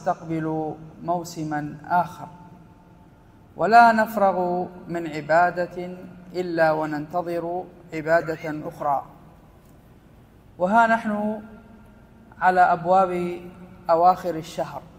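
Nothing goes wrong anywhere in the clip; there are no technical faults to point to.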